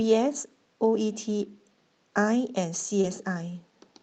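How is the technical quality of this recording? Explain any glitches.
The recording carries the character of an Opus call link, with audio reaching up to about 8 kHz and a coding sound that fits a rate near 32 kbps. It has one brief disturbance just after 3 s, where two faults overlap.

Short concealed packet loss, 3.01 to 3.05 s: About 20 ms of audio failed to arrive in time. The receiver bridged the hole by extending the preceding sound, carrying its pitch forward if voiced or synthesising shaped noise if not, and then cross-faded back into real audio. It is heard as a momentary smear or wobble, and any very short consonant at that spot can be lost.

Lost packet rebuilt from error correction, 3.03 to 3.05 s: One packet in this stretch went missing, but the following packet carried a low-rate backup copy, and the decoder played that instead of leaving a gap. This restores the final 20 ms, so there is no dropout, but that slice sounds rougher and grainier than the audio around it.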